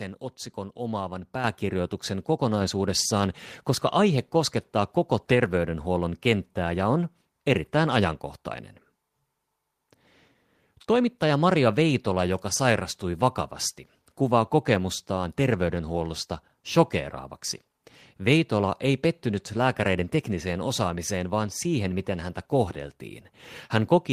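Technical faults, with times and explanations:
1.44 s, microphone volume stepped up: the call software raised the input volume in one step after "otsikon omaavan", so voice and background jump about 6 dB together.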